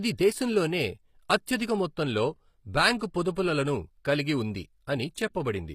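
A speech recording with plainly audible codec damage throughout: the treble is bright but synthetic, with sibilants sounding gritty and metallic, and nothing is present above 15.5 kHz. This is likely HE-AAC compression, where the upper band is rebuilt by copying lower bands upward rather than coded directly, pointing to a low bitrate. At 2.99 s there is pre-echo: a brief smear of hiss, about 20 ms long, leads into a sharp onset, as quantisation noise spreads across the transform block ahead of the attack.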